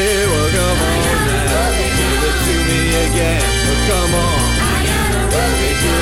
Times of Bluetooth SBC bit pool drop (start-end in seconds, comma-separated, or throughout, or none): none